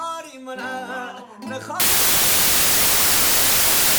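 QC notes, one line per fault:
1.80–3.99 s, samples built from the wrong bytes: misread byte order or alignment makes the low bits dominant, giving loud, harsh broadband noise and flat broadband spectrogram to the end.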